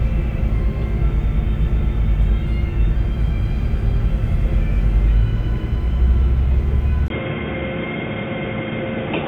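At 7.08 s a 20 ms gap precedes duller, slightly quieter sound cut off above 3.7 kHz, with new background noise: likely an input switched to a poorer device.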